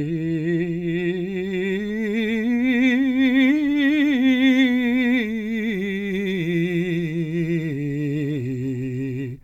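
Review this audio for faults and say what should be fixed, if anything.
Nothing in this music recording needs fixing, as the signal holds steady throughout with no audible technical fault at any point.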